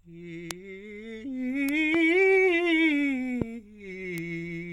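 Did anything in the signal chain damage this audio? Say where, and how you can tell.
Yes. Bit error spikes at 0.51, 1.69 and 4.18 s are isolated ticks, about -7, -7 and -13 dBFS, unrelated to the music. Each sits in one to three samples, pointing to corrupted bits in storage or on a digital link, where flipped bits briefly jump the value.

Loud pops at 1.94–1.97 s and 3.42–3.44 s each add a single sharp thump roughly 15 dB above the music, which continues underneath. These likely come from a voltage transient in the analogue wiring, such as a plug, switch or static discharge.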